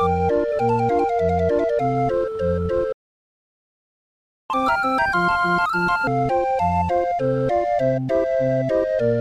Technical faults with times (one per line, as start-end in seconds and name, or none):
2.92-4.50 playback stall
4.50-6.07 catch-up at higher speed